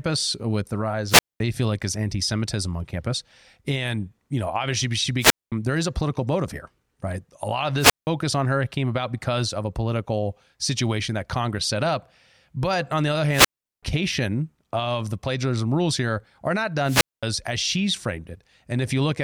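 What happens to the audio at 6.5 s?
At 6.5 s the speech carries on cleanly, with no dropout, click, distortion or other fault to be heard at that point.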